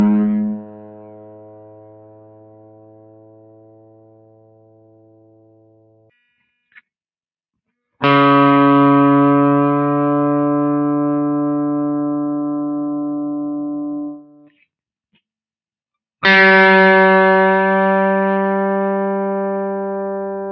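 A speech-tuned noise suppressor runs throughout, treating sustained tones and decay tails as noise. Its gain swings by about 20 dB, so held material pumps and thins while attacks pass. On a waveform, the envelope breathes unevenly; a spectrogram shows sustained partials fading in and out.

From 0.36 to 6.11 s the noise suppressor cuts this sound for roughly five seconds, dropping it by up to about 22 dB. The waveform collapses to a thin trace, and spectrogram energy vanishes in patches, which a listener hears as the sound hollowing out and sinking. The same cut hits again from 14.11 to 14.59 s, a half-second dip of up to about 22 dB that shows as a brief notch in the envelope. The call path's band limit stops everything above 8 kHz, a flat ceiling on the spectrogram.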